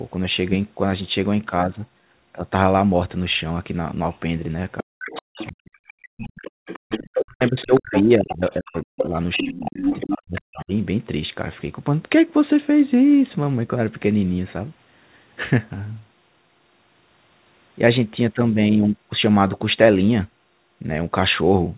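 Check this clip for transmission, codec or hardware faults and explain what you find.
Three echo-canceller faults appear between 4.78 and 10.73 s. The band-limit at 4 kHz, consistent with G.711 mu-law telephone coding, is expected.

Other side's voice leaking through, 4.78 to 10.64 s: a second voice sits roughly 10 dB under the speech, likely from uncancelled loudspeaker echo. It shows as overlapping harmonic traces on a spectrogram.

Speech suppressed in double talk, 4.83 to 5.62 s and 7.17 to 10.73 s: the canceller, likely confused by simultaneous talkers, pulls the voice down by as much as 40 dB. The waveform shows deep envelope notches.

Background gated by the echo canceller, 5.93 to 6.12 s and 6.51 to 6.66 s: room noise drops by about 35 and 36 dB, leaving brief silent gaps in the spectrogram's noise floor.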